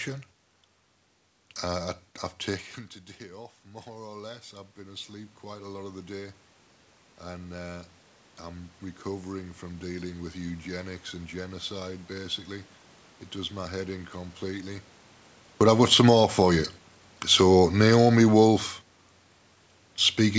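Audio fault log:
3.31–10.94 s, automatic gain rising: the talker moved back around 2.5 s and the input dropped about 18 dB, so the gain crept up about 13 dB, swelling voice and room noise together.
15.46–18.69 s, automatic gain falling: after the talker moved around 15 s, the gain eases down about 5 dB, so voice and background sink together.
16.19–16.76 s, automatic gain rising: partway through that fall, the gain briefly climbs back about 5 dB, so the level swells for half a second before dropping again.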